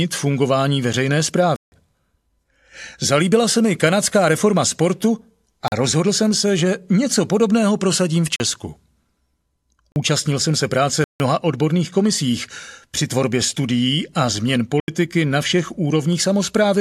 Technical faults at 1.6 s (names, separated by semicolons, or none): block of digital silence